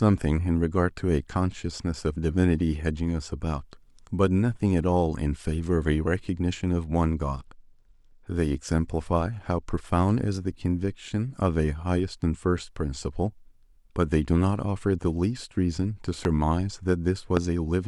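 From 7.01 to 10.28 s and again from 14.80 to 15.85 s the speech shows a Bluetooth SBC bit pool drop. The treble dulls and a gritty quantisation noise rises, which points to the encoder falling from a bit pool of 31 to about 16, roughly 110 kbps.

Loud pops follow at 16.25 to 16.27 s and at 17.37 to 17.39 s, each a single sharp transient around 10 dB and then 15 dB above the speech, which continues underneath. A voltage step, likely from a contact or static discharge, caused them.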